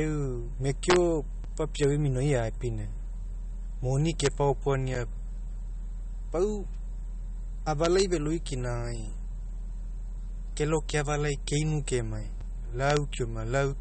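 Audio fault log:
Throughout: MP3 compression. The speech has a watery, swirling texture, with smeared consonant attacks and chirpy s sounds. Nothing reaches above 8.4 kHz, and the damage is plainly audible, which points to a low bitrate of about 34 kbps. A spectrogram shows a hard ceiling at 8.4 kHz and flickering holes in the upper bands.
0.90 to 0.96 s, 1.83 s, 4.20 to 4.27 s, 7.84 to 8.02 s, 10.90 s, 12.90 to 12.97 s: integer overflow. Peaks pushed about 0 to 2 dB past the integer limit wrap to the opposite sign instead of clipping, giving harsh cracks on loud syllables. The waveform shows peaks flipping full-scale across zero, and the spectrogram shows broadband vertical streaks.
1.44 s, 4.95 s, 12.41 s: block of digital silence. Samples drop to silence for about 5, 8.5 and 5 ms, with abrupt edges that make a tick or tiny dropout. The waveform shows a flat gap, and the spectrogram shows a thin blank column bracketed by click lines.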